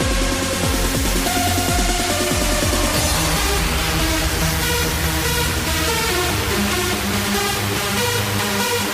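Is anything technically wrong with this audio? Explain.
No, nothing is technically wrong with this audio.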